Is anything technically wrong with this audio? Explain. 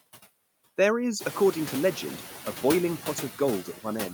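Yes. Noise suppressor artifacts run through the whole speech clip. The suppressor lowers each band it judges to be steady noise by about 13 dB, frame by frame. The background drops in the gaps and returns under the speech. This is clearest once the room noise rises, around one second in.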